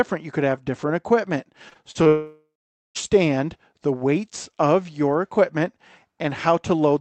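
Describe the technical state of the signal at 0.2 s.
At 0.2 s the speech is intact, with no dropout, click, distortion or other fault, just the ordinary sound of a call path.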